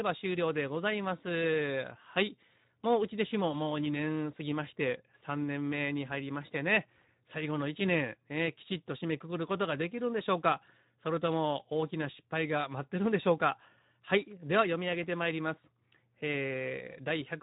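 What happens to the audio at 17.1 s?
At 17.1 s the speech is still passing through the Speex codec, as it does for the whole clip, at a bitrate that fits roughly 11 kbps. Too few bits remain for the excitation signal, so the speech sounds noisy and hoarse, with nothing above 3.8 kHz.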